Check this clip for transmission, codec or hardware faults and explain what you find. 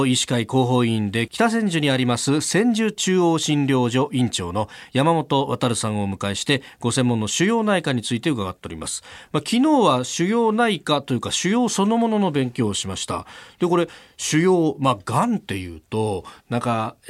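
A short, irregular burst of crackle and scratching breaks into the speech from 8.60 to 8.64 s, which is loose connector crackle. A worn or dirty contact is making and breaking as it shifts, chopping the signal on and off, with any DC on the line adding pops.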